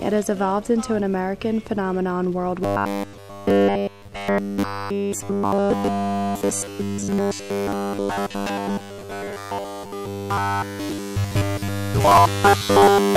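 From about 2.63 s right through to the end at 13.16 s, the sound goes robotic, with that rigid metallic buzz you get from repeated short buffers. New audio is likely arriving too seldom, so the playback keeps looping the last little chunk while the real material gets skipped, and here it's doing that essentially the whole time. The buzz sits at 100 Hz, which fits a repeated slice of about 10 ms, and it stamps that fixed pitch over everything while the sound underneath only roughly comes through.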